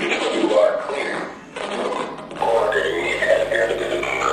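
At 2.39 s a mains buzz starts and runs to the end: switching spikes at 50 Hz, twice per cycle, leak in roughly 20 dB below the sound. Unlike a smooth hum, its harmonics extend into the kilohertz range, giving a raspy edge.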